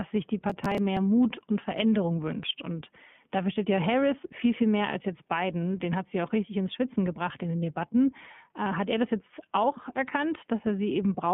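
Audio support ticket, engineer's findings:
Processor overload crackle, 0.50 to 0.97 s, right after "sich die": gritty tearing burst. Host CPU missing deadlines on roughly ten buffers of about 3 ms, each one skipped outright, leaving hard-edged gaps.

iLBC codec throughout, likely around 15.2 kbps with 20 ms frames: band limited to 150 Hz to 3.4 kHz, speech plainly rough and synthetic. Each frame's excitation coded independently, nothing above 4 kHz.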